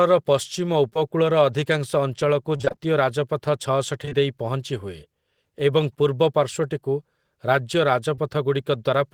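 Short concealed packet loss occurs at 0.89 to 0.97 s, at 4.05 to 4.13 s just before "ଦେଇ ପହଞ୍ଚିହୁଏ", and at 8.15 to 8.19 s. Each 20 ms hole, two in a row at the first two points, is bridged by extending the preceding speech, heard as a brief smear or wobble. From 2.57 to 2.79 s, repeated packet loss (robotic sound) sets in: six 20 ms gaps in quick succession, with roughly half the span synthesised, give a choppy texture with fragments missing.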